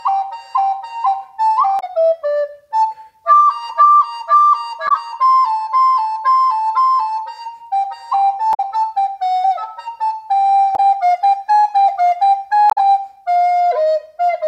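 Five short bursts of damaged data in a compressed stream occur at 1.77–1.84 s, 4.85–4.90 s, 8.50–8.60 s, 10.72–10.80 s and 12.68–12.78 s. At each point the decoder receives corrupted bytes, misreads the affected frames and loses sync until it finds the next valid header. The result is a brief chirp or blip. A spectrogram shows each as a narrow vertical smear of broadband energy. The waveform shows an abrupt discontinuity lasting 50 to 100 ms.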